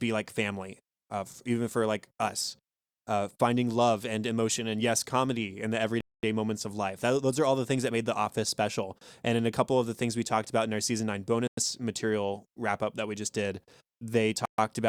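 Speech, cut to silence three times: at 6.01 s for 225 ms after "yes comedy in the", at 11.47 s for 102 ms before "material wrap up that", and at 14.45 s for 131 ms. The likely cause is a Bluetooth stall, with delayed packets draining the headphone buffer.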